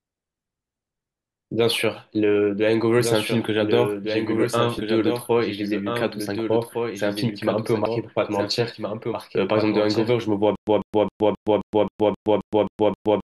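A doubled audio track runs through the whole speech clip. A second full-band copy trails the original by roughly one and a half seconds. It sits about 5 dB lower. It carries no decay or room colour, so it is not an echo. It sounds like a flat, late replay layered under everything. The likely cause is the same audio captured twice, with one copy arriving over a slower path.

Compressed frames are skipped at 4.78 s, 7.86 s and 9.14 s. At each point the speech jumps forward. The first jump loses roughly 150 ms, the second about 100 ms and the third about 70 ms. These lengths fit whole multiples of a 32 ms frame, about four, three and two frames. The decoder moved past missing or rejected data.

A stutter with silent gaps starts at 10.55 s and lasts to the end. A 147 ms fragment plays, then 118 ms of digital silence follows. The cycle repeats every 265 ms, ten times in all. Nothing new is heard during this stretch. 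The audio that should have played there is gone. The likely cause is a stalled player or stream that replays its last fragment on each retry and then runs empty.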